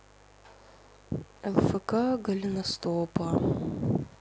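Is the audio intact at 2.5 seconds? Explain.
No. At 2.5 seconds, as across the whole clip, there is mains buzz. Somewhere in the signal chain, a switching source such as a dimmer or rectifier, or a poorly shielded cable, is injecting sharp spikes twice every 50 Hz mains cycle. Those spikes carry a dense stack of 50 Hz harmonics reaching up into the kilohertz range, so beneath the speech there is a steady, raspy buzz sitting roughly 30 dB below it.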